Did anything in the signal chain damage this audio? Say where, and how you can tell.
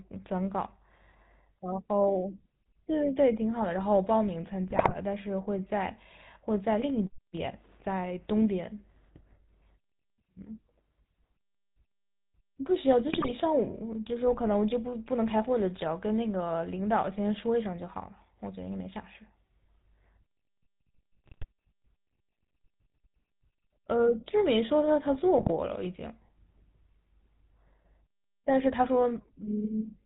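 Yes. The codec stage left its mark across the whole clip: the speech has the buzzy, gravelly roughness of the GSM full-rate codec, and the sound points to the 13 kbps full-rate coder. Because the excitation is rebuilt from coarse, regularly spaced pulses through a vocal-tract filter, the fine harmonic detail is gone. A spectrogram would show nothing above 4 kHz, with smeared, grainy harmonics below that.

The network or radio link added GSM bit errors at 4.7 to 4.94 s, 13.12 to 13.33 s, 21.24 to 21.46 s, and 25.38 to 25.52 s. Each burst breaks into squawks, pops and gargling. Corrupted filter, pitch and gain values make the decoder produce a wrong spectrum or a sudden level jump for each frame. The bursts fit a few percent of bits flipped over six to eleven 20 ms frames. The waveform would show blocky amplitude spikes, and the spectrogram would show frame-wide smears of misplaced energy.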